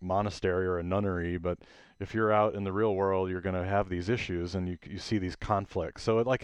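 No technical faults are audible.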